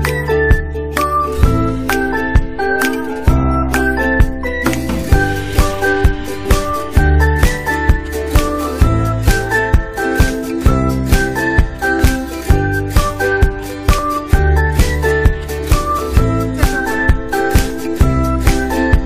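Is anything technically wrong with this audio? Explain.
Yes. Overlap between stream segments at 11.99, 13.98 and 15.99 s: adjacent segments carry overlapping time stamps, so the player discards audio that was never duplicated, and the waveform jumps. Each is a tiny click or skip, recurring every 2 s at segment boundaries.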